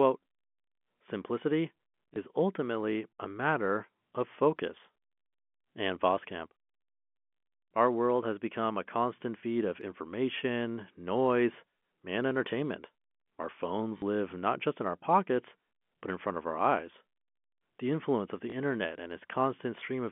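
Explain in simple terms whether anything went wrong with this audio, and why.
Three brief hiccups come from packet loss with last packet repeated. At 2.14 s, just before "ultimately a matter of", and at 18.50 s, right after "influence of the", a single 20 ms chunk goes missing. At 13.98 to 14.02 s, just before "live not just in", the gap is twice as long. Each time, the line replays the last bit it got, so you hear a small blip at the single ones and a short robotic stutter at the longer one. The telephone-band sound of the call comes through as expected.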